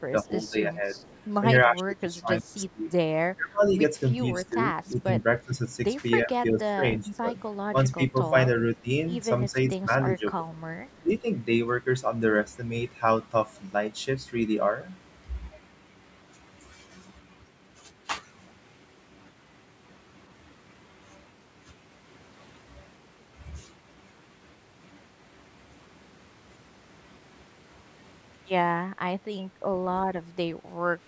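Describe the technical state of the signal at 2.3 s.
At 2.3 s the speech dips by up to roughly 20 dB within 1.66–3.76 s, likely speech suppressed in double talk, the echo canceller attenuating the near talker.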